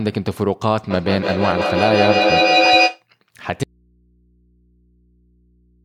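From 0.9 s to 3.06 s there's feedback echo between two devices: the sound keeps coming round again roughly every 150 ms, and the repeats build to about 5 dB above the speech itself. Another device in the room is replaying this call, and its output lands back in the microphone, where the local echo canceller can't remove it.

At 3.64 s the speech cuts out abruptly and stays gone to the end, leaving only mains hum roughly 40 dB down. That's an audio dropout to a faint residue, likely the wanted signal being lost while the path after the break stayed live.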